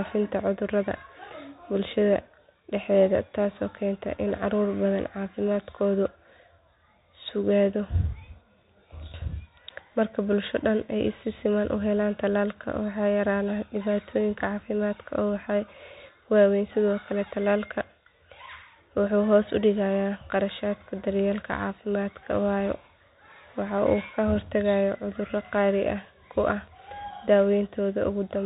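From start to end, the speech carries Bluetooth CVSD headset codec damage: one-bit up/down coding with an adapting step, consistent with a 64 kbps link. Sibilants turn scratchy over a granular hiss. A spectrogram shows everything cut off at 4 kHz; the waveform looks fuzzy and stepped.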